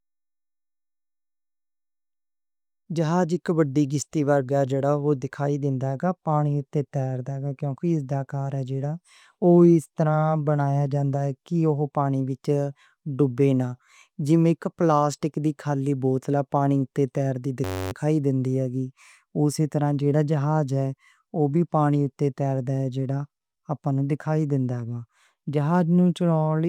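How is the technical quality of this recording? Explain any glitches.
A system hang loop at 17.64–17.92 s, right after "تیر دی": a driver stall left the hardware replaying one 10.67 ms buffer, which fits a 512-sample ring. It repeats at 93.8 Hz as a steady buzz, with essentially no audio lost.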